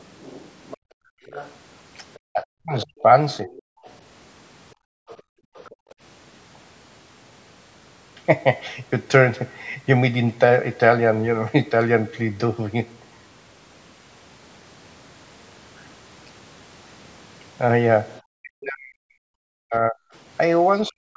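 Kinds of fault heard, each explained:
Other side's voice leaking through: A second, fainter voice runs under the main talker from the start to 3.97 s, about 20 dB below, and again from 5.08 to 5.94 s, about 25 dB below. It is likely the far end playing from a loudspeaker and not fully removed by the echo canceller. Unlike double-talk suppression, which takes sound away, this adds an extra voice on top of the talker.
Background gated by the echo canceller: The room sound itself drops away while the loudspeaker plays, first from 0.77 to 1.25 s with a drop of about 38 dB, then from 4.75 to 5.97 s, roughly 0.7 s in total, down by about 40 dB. The canceller clamps the microphone and then releases it. What sets this apart is that the background empties out into near silence rather than the talker's voice being cut.
Speech suppressed in double talk: The talker's own voice dips and breaks into pieces while the other side is also speaking, from 2.31 to 3.56 s, roughly 0.7 s affected, and again from 18.37 s to the end, about 2 s affected, with drops near 40 dB. 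This is likely the echo canceller mistaking the talker for echo during overlap. Unlike gating, it is the voice itself that gets chopped, not just the room behind it.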